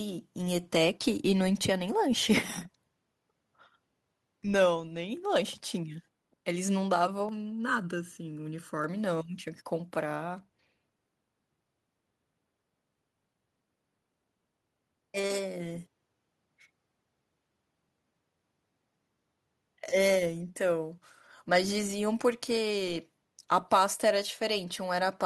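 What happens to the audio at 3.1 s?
Nothing goes wrong at 3.1 s; the speech carries on intact there, with no dropout, click or distortion.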